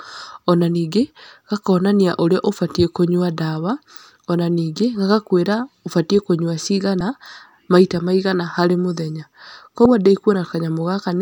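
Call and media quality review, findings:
Two brief glitches in the speech, 6.98 to 7.01 s and 9.83 to 9.86 s. Damaged data in the compressed stream: decoder misreads corrupt frames, loses sync, recovers at the next frame header.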